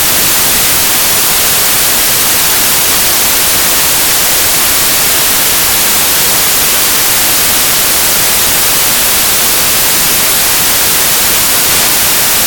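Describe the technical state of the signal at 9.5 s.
At 9.5 s you're hearing samples built from the wrong bytes, same as across the whole clip: the reader misassembles each sample, so the jittery low bits dominate and it comes out as loud, harsh broadband noise.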